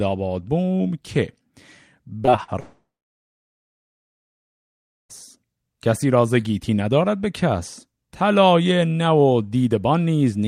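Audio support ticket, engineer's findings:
Repeated packet loss (robotic sound), 2.25–2.50 s: network jitter path dropping packets, four gaps (longest 43 ms) patched by repeating prior audio, about a third of span concealed; choppy, robotic texture.

Long network dropout, 2.60–5.11 s: brief continuation of last sound, then roughly 2.2 s silence; audio resumes with about 2.5 s missing. Likely cause: network stream interruption with receiver concealment.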